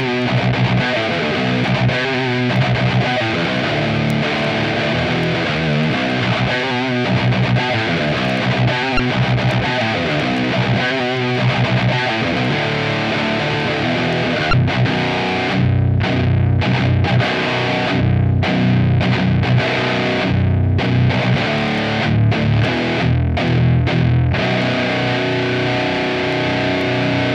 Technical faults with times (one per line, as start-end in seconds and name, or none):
8.96-9.00 damaged data in a compressed stream
14.50-14.53 damaged data in a compressed stream